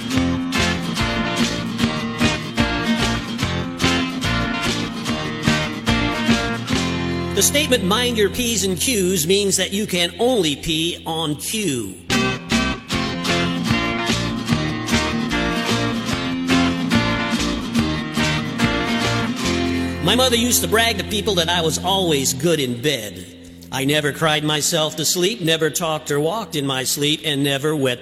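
Two brief glitches break up the audio, at 13.10 to 13.15 s and 15.28 to 15.34 s, where damaged data in the compressed stream made the decoder misread frames and lose sync.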